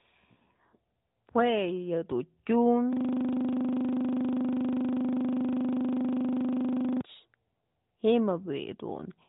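A speech recording in which the system hung from 2.93 s to 7.01 s: the driver or computer stopped supplying new audio, and the sound hardware kept replaying the same 40 ms stretch of its ring buffer. That system hang loop repeats the fragment exactly, roughly a hundred times, at 25 Hz, so the voice gives way to a rough, steady buzz at that rate for about four seconds. Throughout, the AMR narrowband mobile codec path limits the audio to below 3.8 kHz.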